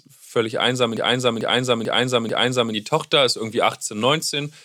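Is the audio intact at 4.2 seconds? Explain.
Yes, at 4.2 seconds the audio is intact, with no fault audible at that moment.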